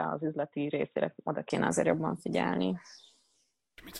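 Until 1.5 s the speech sounds dull and quieter, likely an input switched to a poorer device; the spectrogram is empty above 3.8 kHz until full bandwidth returns without a gap.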